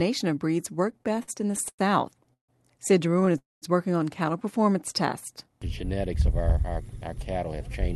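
From 0.91 s to 2.50 s the audio stutters and drags, halting twelve times with the last sound held and smeared across each hold, the longest about 150 ms. These are repeated stalls (stutter): packets kept arriving late, so the jitter buffer ran dry again and again and the receiver filled about 390 ms, a quarter of that stretch, by continuing what it had, losing nothing.

At 3.38 s the sound stalls. A brief fading continuation gives way to about 190 ms of silence before the audio resumes at 3.64 s, picking up exactly where it halted. This call audio freeze likely came from packets held up in transit, emptying the buffer for 240 ms and adding that much delay.

From 6.15 s to 7.75 s the audio runs slightly faster, at about 102% speed with its pitch unchanged. This is a jitter buffer speed-up: with too much audio queued, the receiver trimmed short pitch-period slices, a few tens of milliseconds in all, to bring the delay back down.

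Throughout, the Opus call path limits the top end to about 12 kHz, which fits a moderate call bitrate of around 32 kbps.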